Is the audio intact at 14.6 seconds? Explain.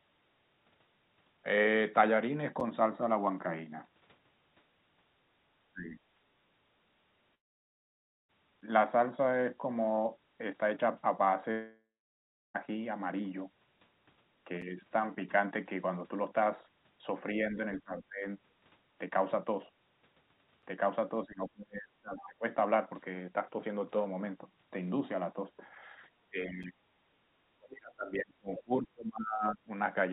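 No. At 14.62 s there is a gap between chunks. The audio was delivered in 6-second pieces, and about 7 ms of silence was left at one join. No sound is lost, but the flow breaks: a brief hole against speech that, through the call path's G.711-style coding, carries nothing above 4 kHz.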